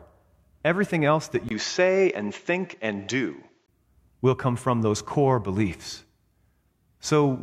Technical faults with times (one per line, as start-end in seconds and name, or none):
1.49-3.68 input switched to a poorer device